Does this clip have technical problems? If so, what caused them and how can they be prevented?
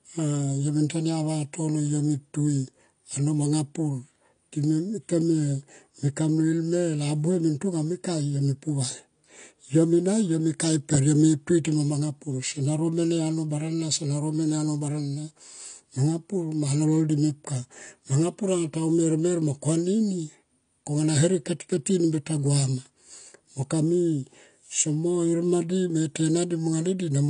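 Yes. Throughout, the speech sounds dull and fizzy, with nothing above 9.8 kHz. This likely comes from AAC compression at a low bitrate (about 32 kbps), which trims the top band and leaves spectral holes. A spectrogram shows a flat ceiling at 9.8 kHz with patchy gaps beneath it. To prevent this, encode at a higher bitrate or keep the audio uncompressed until final delivery.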